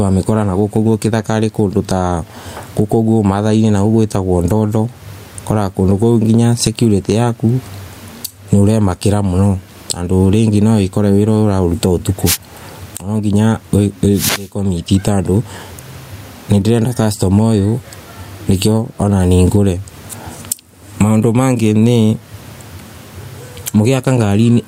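Gain pumping runs through the whole clip. The gain swings around 20 dB. An overdriven input hitting a fast limiter is the likely cause. Wireless microphone noise hits occur at 12.25 to 12.37 s and 14.12 to 14.54 s. The radio link faded, and receiver noise rose as a swish of static.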